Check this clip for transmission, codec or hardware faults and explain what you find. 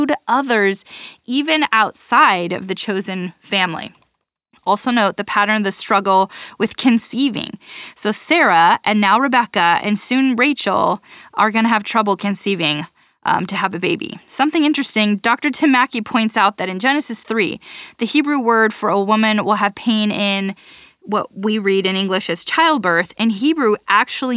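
I found no faults in this clip.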